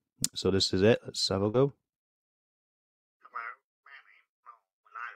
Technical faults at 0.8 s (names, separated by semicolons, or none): none